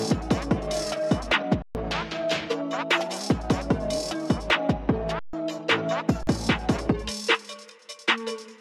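The output buffer ran empty three times, causing an underrun with held sample: at 1.62 s for 128 ms, 5.19 s for 143 ms, and 6.23 s for 43 ms. The waveform freezes flat, the sound drops out, and it resumes with some audio skipped.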